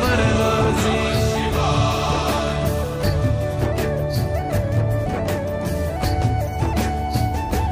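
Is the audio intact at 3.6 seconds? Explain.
Yes, at 3.6 seconds the audio is intact, with no dropout, click, distortion or other fault at that point.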